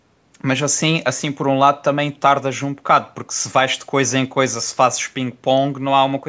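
The speech carries no technical faults; it has passed through normal call microphone processing, so the lowest bass is filtered out and nothing reaches above 8 kHz.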